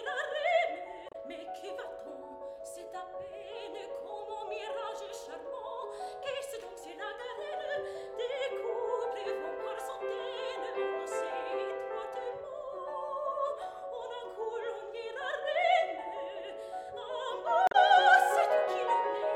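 At 1.09 to 1.15 s and 17.67 to 17.75 s, damaged data in the compressed stream makes the decoder lose frame sync, producing a brief glitch each time.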